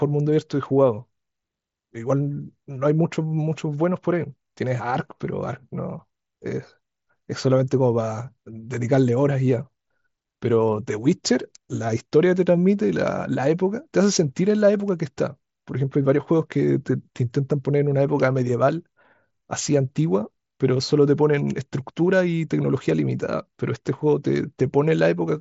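No technical faults can be heard in this speech, which comes through a Bluetooth mSBC headset link working normally, with its usual wideband ceiling leaving nothing above about 7.7 kHz and only a light graininess on louder moments.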